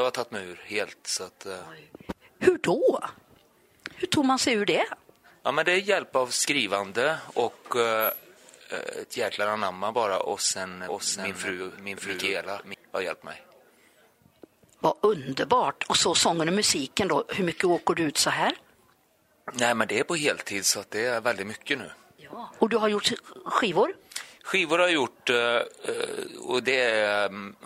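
From 10.88 to 12.74 s, a doubled audio track appears. A second full-band copy trails the original by roughly 0.7 s, a few dB quieter. It has no decay or room colour. It cuts in and out abruptly. The likely cause is a slower second capture path.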